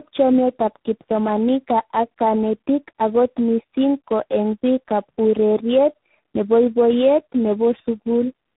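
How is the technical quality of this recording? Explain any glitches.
The quality is poor for the whole clip, because of tandem speech coding. The speech has passed through several speech coders one after another, being decoded and re-encoded at each hand-off. Each coder's errors are layered on the previous one's. Nothing is left above about 3.8 kHz, so the speech sounds muffled and narrowband. On top of that there is a gritty roughness and a watery, warbling quality. This mix points to about three distinct speech codecs in series, with the last one most likely G.726.

A single low-bitrate codec would also cut the highs and smear the sound. What marks this as tandem coding is the combination of artefacts at once. There is the granular noise of a waveform coder together with the swirly, artificial warble of a very low-rate model-based coder, and the combined damage is heavier than either would cause alone.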